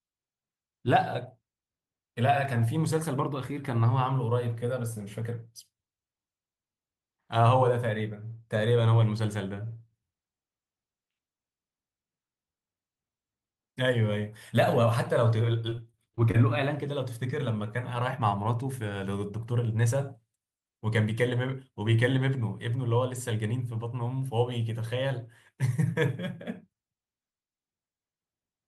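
Around 15.69 to 16.38 s the speech hits repeated packet loss, giving that robotic sound: six short dropouts, the longest about 24 ms, each patched by stretching the previous sound, so roughly a fifth of that stretch is filler and it comes out choppy and broken.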